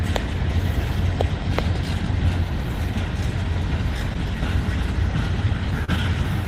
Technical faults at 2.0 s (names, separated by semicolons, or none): none